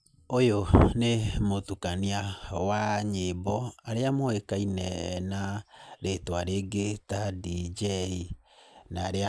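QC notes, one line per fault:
No faults heard anywhere in the speech.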